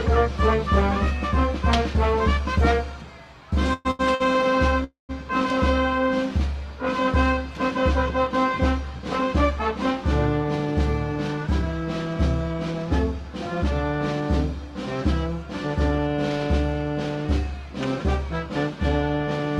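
At 3.73 to 3.87 s the sound stops moving forward and the last moment is drawn out for about 115 ms as a fading buzz, with nothing lost once it resumes. This is a call audio freeze, likely from packets held up in transit so the jitter buffer emptied. On a spectrogram the preceding spectrum smears into flat horizontal streaks that decay. The waveform shows a repetitive tail instead of fresh detail. A second freeze at 4.84 to 5.11 s lasts about 249 ms. Its fill fades into roughly 140 ms of silence, which appears as a blank band on the spectrogram and a flat line in the waveform before the sound picks up exactly where it left off.

Between those, two short stalls from a late packet occur at 3.91 to 4.01 s (about 81 ms) and 4.15 to 4.22 s (about 50 ms). Each time a packet missed its slot, the receiver stretched the current sound until it arrived and then continued from the same point. Each is heard as a briefly held sound with a slight buzz or dip. 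On a spectrogram the harmonics run as unnaturally steady, slightly smeared bars, and the waveform repeats a short cycle.

At 10.44 to 12.83 s a jitter buffer speed-up plays the sound about 4% fast at unchanged pitch, trimming around a tenth of a second. After the delay built up, the receiver cut many tiny pitch-period pieces to shrink its backlog. A stronger pass at 15.67 to 16.08 s runs about 10% fast and removes roughly 50 ms, so it sounds noticeably hurried. On a spectrogram the events are compressed in time with harmonic spacing intact, and the waveform shows small seams where cycles were dropped.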